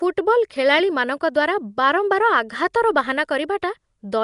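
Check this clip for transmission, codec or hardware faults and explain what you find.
There is one codec fault, and it runs through the whole clip.

Nellymoser compression, throughout: the speech likely passed through Nellymoser Asao at about 44 kbps. Noise filled its starved bands, leaving a hissy, smeared, underwater sound with nothing above 10.6 kHz.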